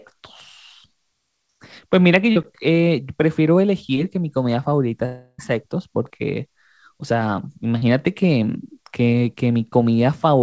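At 2.32 to 2.38 s there is a short concealed packet loss. About 40 ms of audio never reached the decoder in time. The receiver covered the gap by extending the last sound for roughly 37 ms, then blended back into the real signal. It comes across as a brief smear in the speech.

From 5.06 to 5.40 s comes a long network dropout, likely caused by packets failing to arrive for about a third of a second. Around 320 ms of speech is lost outright. The receiver keeps stretching the last sound as a fading buzz or hiss for most of that stretch, about 327 ms. A short silence of about 30 ms follows, and then speech resumes with the lost part gone.

At 7.78 to 7.84 s a second short concealed packet loss repeats the pattern. About 40 ms went missing and roughly 34 ms was filled by continuing the previous sound. The result is again a quick smear before normal audio returns.

The whole clip has nothing above 8 kHz, which fits a wideband call codec in the path.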